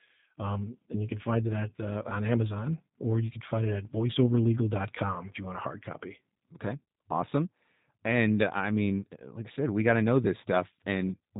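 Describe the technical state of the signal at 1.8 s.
Right around 1.8 s the speech carries VoIP packet loss concealed by the speech codec, spanning about 1.76 to 1.80 s, just after "you can find it" and before "uh on". Roughly 20 ms of audio never arrived, which fits two lost 10 ms frames. The decoder filled the gap by repeating its last pitch and vocal tract filter at falling gain, so the sound smears into a buzzy tone or coloured noise that fades. On a waveform this looks like a short run of repeated, shrinking periods. On a spectrogram the harmonics freeze horizontally and fade, and the speech that follows stays weak or distorted for a short while.

The same moment also carries the G.729 codec, here G.729A at 8 kbit/s, with plainly audible damage. The decoder rebuilds speech from a vocal tract filter, a pitch predictor and sparse pulses, so this stretch sounds rough and slightly synthetic. 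A spectrogram shows nothing above 4 kHz and blurred, grainy detail below it.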